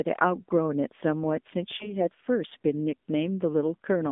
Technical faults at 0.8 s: AMR narrowband mobile codec

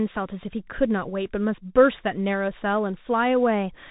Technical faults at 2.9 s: Bluetooth CVSD headset codec

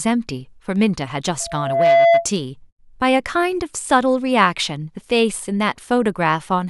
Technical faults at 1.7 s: loudspeaker feedback squeal

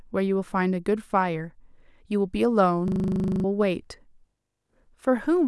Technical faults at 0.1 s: none

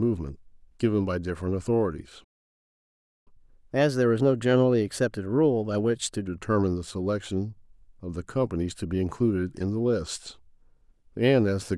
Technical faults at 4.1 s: catch-up at higher speed

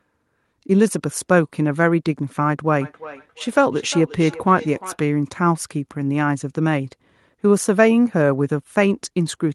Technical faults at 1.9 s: none

